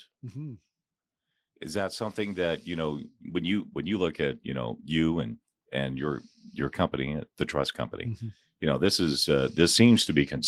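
Automatic gain rising, twice: the gain control judged the input too quiet and raised it about 8 dB from 1.72 to 6.3 s, before "your company the trust", then again from 8.47 s to the end, swelling speech and background together.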